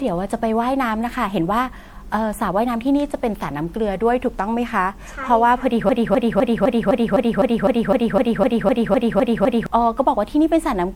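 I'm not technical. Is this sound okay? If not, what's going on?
No. The speech was likely saved in a compressed format, then reopened and saved again, about four times over. This is generation loss: each round throws away a little more detail, so the voice sounds swirly, hollow and smeared throughout, with blurred starts to sounds.

From 5.89 to 9.66 s there is a broken-record loop. The playback or recording likely froze and kept replaying the last piece it held, a snippet about a quarter of a second long, 15 times back to back. Whatever was said in that stretch is missing.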